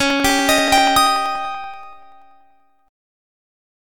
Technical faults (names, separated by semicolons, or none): periodic USB or driver dropouts